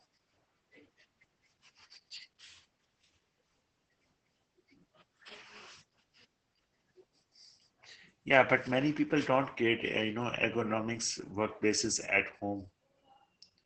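Opus voice compression runs throughout the speech, and the damage is heavy. The codec is working in its SILK linear-prediction mode at wideband, so nothing above about 8 kHz survives, and the sibilants sound dull and muffled. The excitation signal is coded so coarsely that the voice turns hoarse and faintly robotic. That points to a bitrate near 10 kbps, coded in frames that fit 20 ms.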